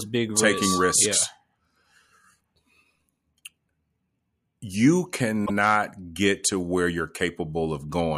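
Right at the start, from 0.33 to 0.97 s, there's a loudspeaker feedback squeal. The mic is hearing its own speaker, and a 1.2 kHz tone runs away around the loop, swelling over just under half a second until it's roughly as loud as the speech. Later, at 5.45 s, you get repeated frames: a 52.2 ms chunk plays a second time, which sounds like a little stutter and stretches the clip by that same 52.2 ms. That length fits a couple of compressed frames being sent twice.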